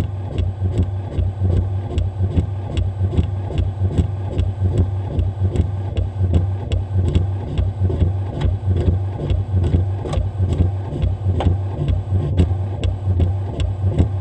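No technical faults can be heard anywhere in the signal; it holds steady throughout, with nothing in the audio path drawing attention to itself.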